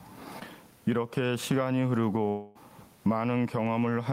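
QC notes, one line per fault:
Throughout: gain pumping. The gain swings by roughly 15 dB. Loud and soft parts sit close in level. The likely cause is input gain set far too high, with a fast limiter clamping every peak.
0.39–0.43 s: short concealed packet loss. About 20 ms of audio never arrived in time. The receiver extended the preceding sound to fill the hole, then blended back. It is heard as a brief smear or wobble in the speech.
2.29–2.57 s: long network dropout. Roughly a quarter second of audio was lost and never played. The receiver stretched the last sound into a fading buzz or hiss across the whole gap, with no true silence. It then resumes further on, with that stretch missing. A network outage is the likely cause. The quiet room noise sits about 44 dB below the speech.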